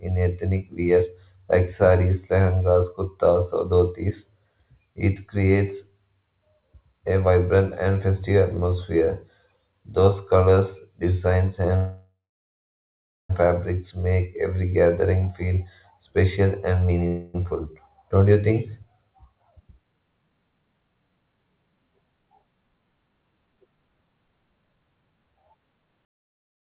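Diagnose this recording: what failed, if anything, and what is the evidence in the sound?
Call audio freeze at the jitter buffer. After "colors designs", 11.76 to 13.31 s becomes a fading buzz, then about 1.1 s of silence. After "special and", 17.07 to 17.36 s is a brief buzz. Speech resumes intact, just late. Likely cause: delayed packets emptying the buffer.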